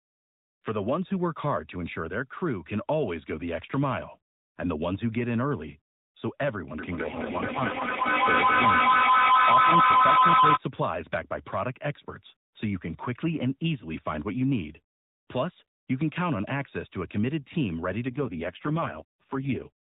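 At 6.79 s a feedback howl starts. Two devices in the same room have joined the call, so the output of one loudspeaker reaches a microphone and is sent back with more gain on every pass. Instead of fading, each repeat grows louder and narrows to a tone of around 1 kHz. The tone pulses about every fifth of a second, peaks at about 8 dB above the speech, and continues until the loop is broken at 10.62 s.

Inside the howl, from 7.02 to 8.08 s, there is an AMR rate drop. The mobile link weakened, and the network told the narrowband codec to spend fewer bits on the voice and more on error protection. The step appears to go from 12.2 kbps to 4.75 kbps. The band stays at the usual sub-4 kHz phone width and nothing drops out, but the speech turns buzzy and synthetic. The same drop happens again from 18.08 to 19.69 s, with the same roughening, before the rate recovers.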